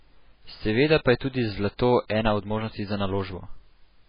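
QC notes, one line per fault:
Throughout, MP3 compression: the encoder was likely starved of bits, at a rate the damage suggests is around 16 kbps, so it zeroed weak frequency lines frame by frame and cut everything above 5 kHz. The speech comes out dull and watery, with heavy swirling as components flicker in and out between frames, smeared consonant onsets, and s sounds that lose their hiss or turn metallic and chirpy.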